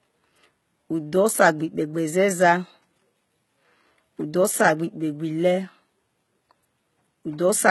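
Speech with gritty, metallic sibilants and synthetic-sounding treble throughout, cutting off above 11.8 kHz, likely from heavy HE-AAC compression, which fits a bitrate around 16 kbps.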